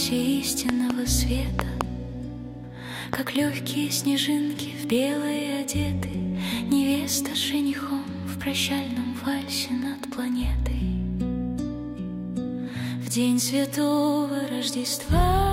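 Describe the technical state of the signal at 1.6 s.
At 1.6 s there is a loud pop, spanning 1.59 to 1.83 s. Two sharp pops land in quick succession, peaking about 20 dB above the signal. The likely cause is a sudden voltage pulse, shaped by later circuits, added on top while the sound continues underneath.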